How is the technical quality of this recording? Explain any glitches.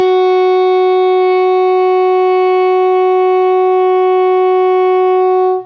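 The technical quality of this music recording is good, with no glitches to explain.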